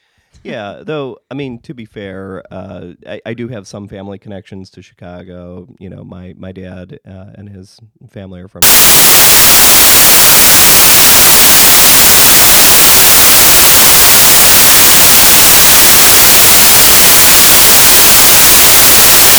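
Samples built from the wrong bytes take over this speech clip from 8.62 s to the end. The reader misassembles each sample's bytes, so the rapidly changing low bits land in the high positions, and loud, harsh broadband noise replaces the sound, close to white on the louder passages.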